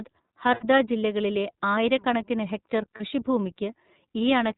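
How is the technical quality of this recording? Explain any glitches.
The recording has clearly audible coding damage throughout and two short dropouts.

Throughout, the speech sounds band-limited, slightly rough and synthetic, with nothing above 4 kHz. This is the iLBC codec, a narrowband VoIP coder that encodes each frame independently. The texture fits its 13.33 kbps mode with 30 ms frames.

At 0.54–0.64 s, just before "ജില്ലകളിലെ ആയിരക്കണക്കിന് ഹെക്ടർ", the sound becomes a held, buzzy vowel. At 2.97–3.01 s, just after that phrase, a shorter smear occurs. These are lost iLBC frames. The decoder repeated the last pitch cycle mixed with noise, which fits about 90 ms and 30 ms of loss. The voice is right again almost at once after each gap.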